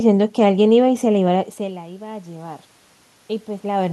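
From 0.85 to 2.7 s, the automatic gain rising is audible. The input level fell by about 20 dB, so the gain control slowly added about 5 dB. Voice and room noise swell together. The drop fits the talker moving back around one and a half seconds.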